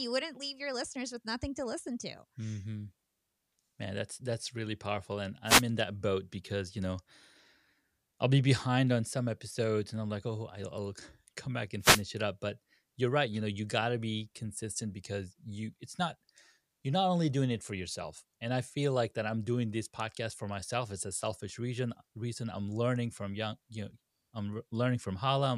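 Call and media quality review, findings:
Wireless microphone noise hit, two events: 5.46–5.63 s and 11.80–12.03 s. Analogue FM radio link fading as multipath reflections cancel at the receiver antenna. Receiver noise floor rises through each dip. Heard as short swishes of static, about 0.17 s and 0.23 s long. Probable component: analogue FM radio link.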